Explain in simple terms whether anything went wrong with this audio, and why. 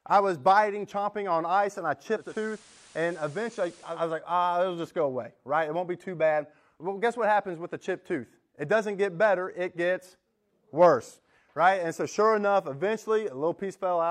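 Something did go wrong, from about 2.13 to 4.06 seconds. Right after "on ice and I", the speech goes through a digital radio blending to analogue. The radio lost its digital signal and faded over about a quarter of a second to the FM version of the same station. You get a hiss underneath and slightly quieter sound. It switches back just before "was like ah it'll".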